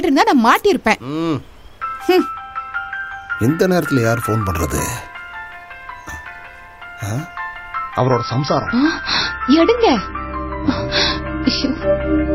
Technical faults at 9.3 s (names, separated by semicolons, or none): adaptive stream at a lower bitrate